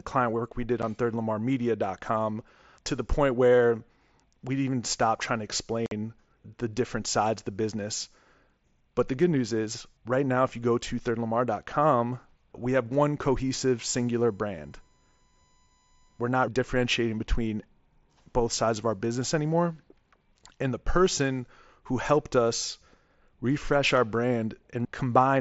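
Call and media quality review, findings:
Unconcealed Bluetooth headset packet loss. Hard-edged dropout at 0.82 s after "client work we did", 7.5 ms. Longer hole at 5.86 to 5.92 s after "even stop trying to", 52.5 ms. Lost mSBC frames replaced by silence or an idle pattern, no concealment.

USB whine. Steady 1 kHz tone from 13.67 to 16.49 s, after "we have one" until "differentiating between". Roughly 40 dB below speech. USB 1 ms frame activity coupling into power or ground.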